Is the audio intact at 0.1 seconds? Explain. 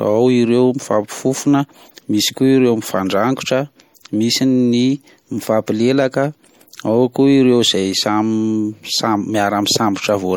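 No. MP3 compression damage runs through the whole speech clip, including 0.1 s, likely from a low-bitrate encode around 64 kbps: dropped frequency detail sounds watery and swirly.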